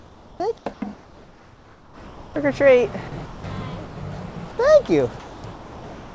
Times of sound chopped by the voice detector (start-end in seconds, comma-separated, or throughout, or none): 3.08-3.44, 4.32-4.58, 5.20-6.15